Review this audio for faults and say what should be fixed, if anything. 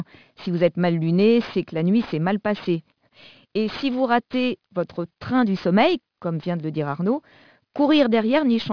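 Aliasing runs through the whole of this speech clip. The audio was resampled downward, which points to a drop from 44.1 kHz to about 11 kHz, without a low-pass filter first. Energy above the 5.5 kHz fold was reflected back down as false, unrelated tones, roughly 25 dB below the speech. Sibilants come out gritty and metallic. On a spectrogram the energy runs hard up to 5.5 kHz, with mirrored streaks that slope opposite to the true harmonics. Resample from the original with a proper anti-aliasing filter that cuts off below the new half-rate.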